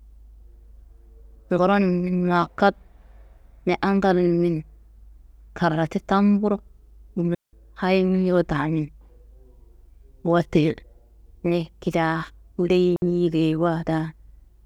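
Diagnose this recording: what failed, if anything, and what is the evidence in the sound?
A digital wireless dropout occurs twice, at 7.35 to 7.53 s and at 12.96 to 13.02 s. The first is a clean hole of near silence lasting about 185 ms, ending just before "hayiro damin"; the second mutes the speech for 60 ms. Neither gap has a burst of noise on either side. The failure is in the wireless transmission link: the receiver lost too much data, and rather than output corrupted audio it faded quickly to silence until the signal recovered.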